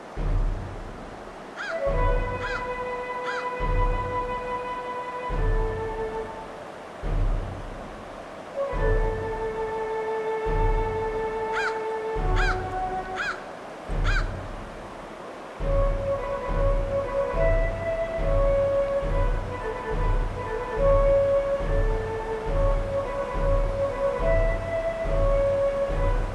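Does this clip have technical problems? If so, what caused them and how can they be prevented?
No, there are no technical problems to report here.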